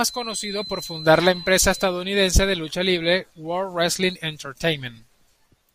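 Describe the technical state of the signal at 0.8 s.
At 0.8 s a feedback whistle sits under the speech. It runs from the start of the clip to 2.0 s and stops just before "de lucha libre". It is a thin, steady tone at 4 kHz, roughly 15 dB below the voice, and it swells and fades slowly in level. The likely cause is a loudspeaker-to-microphone loop held right at the edge of feedback. One frequency keeps ringing without building up into a howl.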